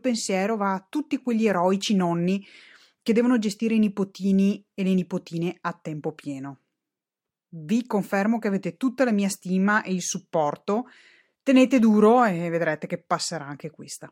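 No technical faults can be heard anywhere in this speech recording. Nothing in the signal calls for a timestamp or an explanation.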